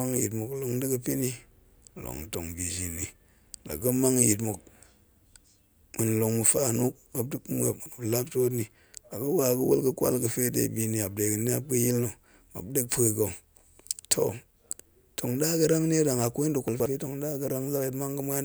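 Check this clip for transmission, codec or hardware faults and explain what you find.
Two short scrambles are audible, both the same fault. Chunks out of order occurs at 7.8 to 7.92 s and again at 16.68 to 16.86 s, just after "kwai nda̱". In each, a 60 ms piece of audio was delivered late and played after material that should have followed it: one chunk late the first time, two the second. Nothing is missing, but the sequence is jumbled, so each moment sounds garbled.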